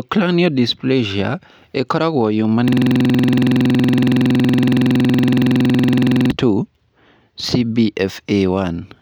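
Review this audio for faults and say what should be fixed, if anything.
From 2.68 to 6.31 s the speech locks into a rapid machine-gun stutter: one 46.4 ms fragment repeats exactly, nearly 80 times, at about 21.5 Hz. This is a system hang loop. The host or driver froze while the audio hardware kept replaying the same ring buffer, which fits a 2048-sample buffer. To prevent it, keep the audio thread free of blocking work and have the driver mute output when the buffer stops being refilled.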